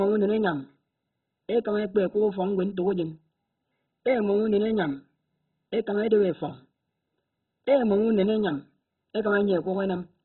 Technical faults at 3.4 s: MP2 compression

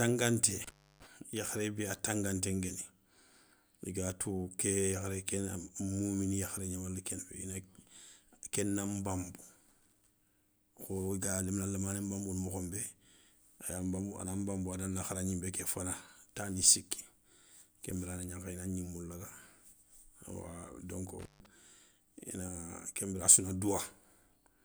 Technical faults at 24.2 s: none

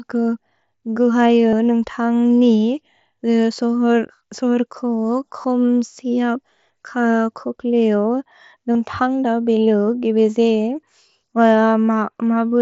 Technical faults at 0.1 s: none

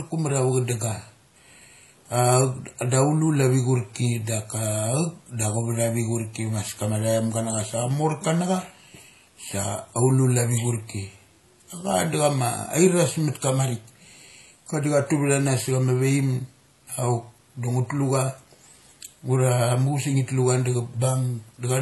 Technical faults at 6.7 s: transcoding between lossy codecs

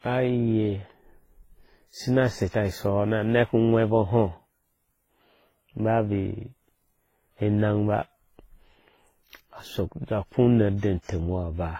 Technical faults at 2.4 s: transcoding between lossy codecs

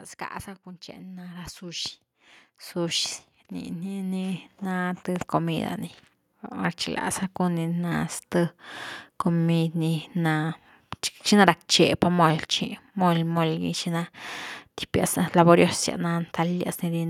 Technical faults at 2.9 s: automatic gain rising

